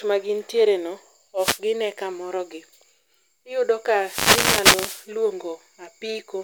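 Right at 1.37 s there's a wireless microphone noise hit, a quick swish of static lasting until about 1.60 s. That's the FM radio link fading as reflected signals cancel, so receiver noise rises. The second one, from 3.95 s to 5.10 s, is longer, a burst of static that lasts for over a second.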